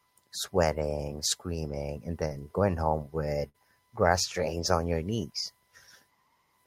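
At about 2.27 s there's a short concealed packet loss. Around 20 ms of the speech never arrived in time, so the receiver patched roughly 26 ms by extending the previous sound, leaving a quick smear through to about 2.36 s.

Then at 3.49 s comes a burst of packet loss, running to 3.56 s. About 60 ms went missing in a row. The decoder stretched the last sound over roughly 56 ms while fading it, so you get a brief held, dying fill before the speech picks up further along.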